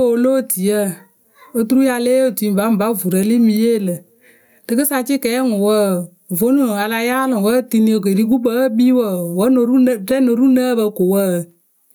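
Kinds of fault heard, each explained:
Gain pumping: level ducks by around 10 dB under loud speech, unlike a gate's silent gaps; likely excessive gain into a fast limiter.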